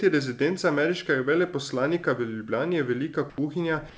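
At 3.30 to 3.38 s and again at 3.90 to 3.98 s, the quiet background between speech gives way for about 80 ms to comfort noise in place of the background: a steady, featureless hiss, about 6 dB and about 2 dB quieter respectively. The likely cause is discontinuous transmission, with the receiver synthesising noise while the sender is silent. Unlike a dropout, the gap never falls to true silence. The sound around it is band-limited to 8 kHz, which fits a G.722 call codec.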